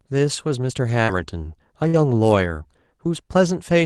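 At 0.89 to 0.91 s a lost packet was rebuilt from error correction. The next packet carried a low-bitrate copy of the missing 20 ms, so nothing drops out, but that frame sounds rougher and noisier. On a spectrogram it appears as a thin vertical band of smeared, grainier energy. The waveform shows no gap.

From 1.03 to 1.10 s there is a short concealed packet loss. About 40 ms never arrived in time. The receiver extended the preceding sound for 44 ms and then crossfaded back, so you hear a brief smear or wobble. On the spectrogram, harmonics or noise are stretched flat instead of evolving. At 1.08 to 1.10 s, the last 20 ms of that stretch were rebuilt from error correction, adding a rougher texture as the real signal returns.

Another error-correction rebuild falls at 1.84 to 1.86 s. It is again a single coarse, noisier 20 ms slice.

From 1.88 to 1.95 s there is a burst of packet loss. About 60 ms of consecutive audio is missing. 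The concealment held the last sound for 55 ms while fading it, which produces a droning buzz or a dying hiss that then jumps ahead in the speech. The waveform shows a tapering envelope, and the spectrogram shows frozen, dimming bands before an abrupt resumption. The final 20 ms, 1.93 to 1.95 s, were rebuilt from error correction and sound rough.

The last rebuilt packet sits at 3.03 to 3.05 s, a short noisy blemish. All of this passed through a WebRTC call path using Opus. Its content stops near 12 kHz, and its coding noise points to a rate around 32 kbps.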